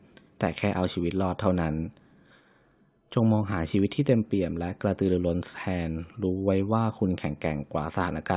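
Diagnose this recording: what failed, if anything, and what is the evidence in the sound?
No fault is audible here.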